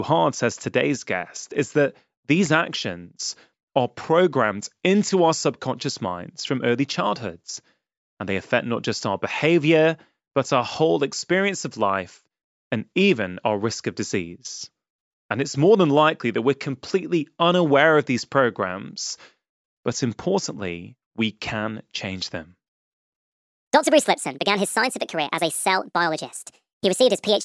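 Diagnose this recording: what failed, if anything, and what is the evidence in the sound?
Wrong sample rate from 23.53 s to the end at 27.45 s: the speech abruptly runs 1.5 times faster and rises about seven semitones, high and hurried. This is a playback-stage fault: samples were clocked out unconverted, which fits 16 kHz material played at 24 kHz.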